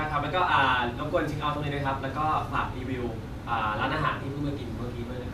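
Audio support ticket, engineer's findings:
Nothing to report on this speech clip: no dropouts, glitches or other faults turned up anywhere in the recording.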